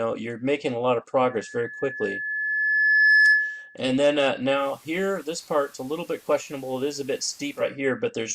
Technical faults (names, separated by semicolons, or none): loudspeaker feedback squeal; digital radio blending to analogue